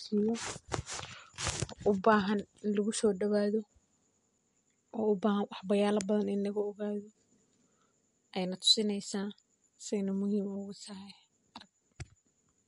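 Speech with plainly audible MP3 compression throughout: nothing above 11.2 kHz, watery, swirling sibilants, likely from a low bitrate encode around 48 kbps.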